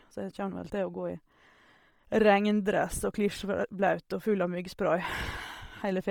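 From start to finish the speech carries a breathy, grainy edge in its upper range, with a fizzy texture where the top should be crisp, and the damage is heavy throughout. This is likely Bluetooth LC3 compression at a low bitrate: the codec discards much of the upper spectrum and fills it with noise, which fits a rate near 32 kbps with 10 ms frames. That synthetic noise fill, rather than a clean dull cutoff, separates it from simple band-limiting.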